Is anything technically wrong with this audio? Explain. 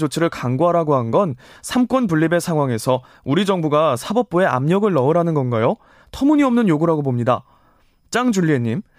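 No, nothing technically wrong can be heard anywhere in this speech recording.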